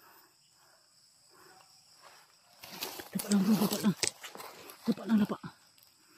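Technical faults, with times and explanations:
0 to 3.44 s, sample clock jitter: the converter's clock wanders by a few microseconds, so each sample is grabbed a hair early or late. Steep, loud, bright passages suffer most, leaving a gritty hiss roughly 20 dB under the sound that disappears in quiet moments.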